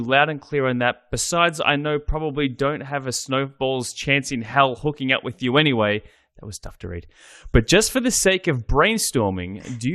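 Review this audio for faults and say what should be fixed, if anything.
MP2 compression, throughout: the speech is dull and carries a gurgling, grainy distortion, with upper frequencies dropping in and out. This is likely MPEG Layer II coding at too low a rate, and the damage level fits around 80 kbps. The coder divides the signal into 32 sub-bands and allots bits to each. Starved of bits, it switches off whole upper bands and coarsely quantises the rest. Encoding at a higher bitrate, or using a more efficient codec, would prevent it.

DAB burbling, 4.94 to 4.97 s: a brief burst of burbling distortion sits over the speech. Bit errors from weak reception, on the order of a tenth of a percent, slipped past error correction into the MP2 data. Corrupted samples put short blips of noise into single sub-bands across five frames. Better reception, through improved antenna placement or signal strength, would prevent it.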